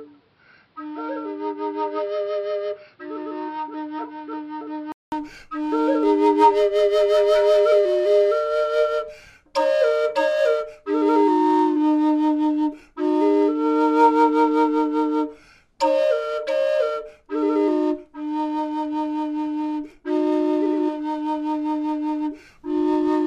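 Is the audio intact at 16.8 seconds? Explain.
Yes, the audio at 16.8 seconds is intact, with no dropout, click, distortion or other fault at that point.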